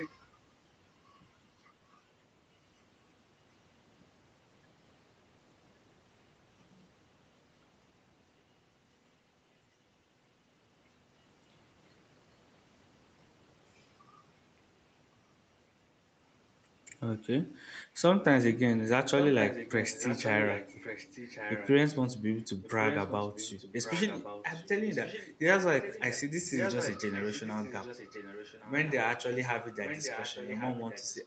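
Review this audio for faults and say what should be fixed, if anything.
Echo leak at 0.0–0.1 s, 19.18–21.98 s, 22.63–26.23 s, 26.54–28.95 s and 29.84 s to the end. A copy of the speech comes back about 1.12 s late, roughly 10 dB below it, and nearer 15 dB below in the final stretch. The likely cause is a far-end loudspeaker whose echo canceller passed its microphone pickup back into the call. To prevent it, the far end should use a headset or a better-tuned acoustic echo canceller, and lower the speaker volume.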